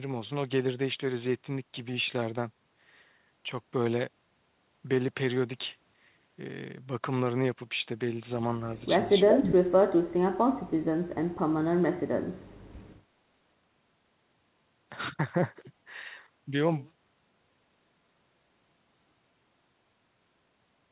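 Speech, carried over a narrowband call path with nothing above 4 kHz, which fits G.711 mu-law at 64 kbps. The talker is pushed down at 8.79–8.84 s (a slight dip of about 5 dB), 9.34–10.86 s (about 40 dB, nearly gone) and 11.96–12.26 s (about 30 dB), likely speech suppressed in double talk. Unlike a network dropout, the level is gated down while another voice is active. From 9.27 to 9.47 s a copy of the speech returns about 389 ms late at roughly the same level, likely an echo leak. The fixed delay marks it as returned loudspeaker pickup rather than reverberation.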